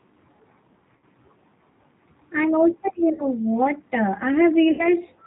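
Throughout, the speech carries G.729 codec damage at 8 kbit/s. Nothing above 4 kHz survives, and there is a rough, faintly synthetic edge from rebuilding each frame out of a vocal tract filter, a pitch predictor and a few pulses. This differs from the swirly smearing of transform codecs.

VoIP packet loss concealed by the speech codec occurs at 0.97 to 1.05 s, at 3.13 to 3.25 s just before "what uh", and at 4.71 to 4.89 s just after "what uh". About 60, 60 and 80 ms of audio were lost, which fits three, three and four 20 ms packets. Rather than leaving a silent gap or a click, the decoder extended its last pitch and filter into a fading buzzy tone or coloured noise, and the sound stays weak or distorted briefly afterwards while frames rebuild.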